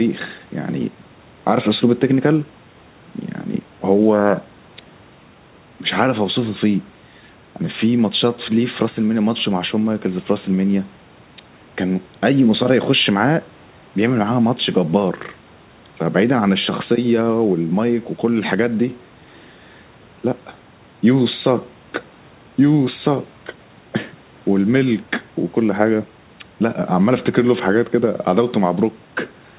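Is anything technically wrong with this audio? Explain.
No, nothing is technically wrong with this speech. It has come through a call path that leaves nothing above 4 kHz, a narrowband sound that fits G.711 A-law at 64 kbps.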